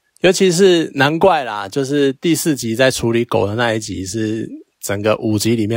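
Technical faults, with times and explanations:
No technical faults, with times and explanations, are present in this speech clip.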